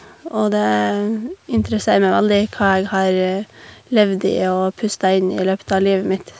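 Speech recording with no technical faults to be heard.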